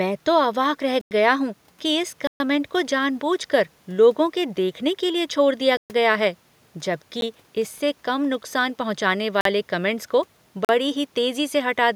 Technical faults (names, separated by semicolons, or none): block of digital silence